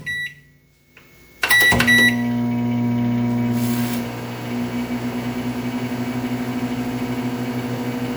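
Repeated MP3 encoding, likely around seven passes at a rate near 128 kbit/s, causes generation loss throughout: the sounds turn swirly, hollow and smeared, with blurred attacks.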